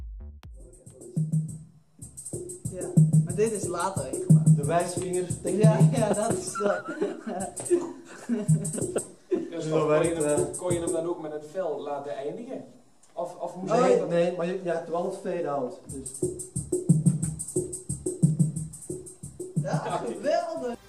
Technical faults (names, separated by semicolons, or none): none